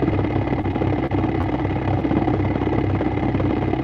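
Between 0.61 and 1.46 s the audio turns choppy and robotic, with four brief dropouts where the sound smears or briefly stalls before carrying on. This is repeated packet loss: successive chunks of audio went missing or arrived too late, and each hole, the longest about 30 ms, was patched by extending the preceding sound. Roughly a tenth of that stretch is concealment, and the repeated patching gives it its broken texture.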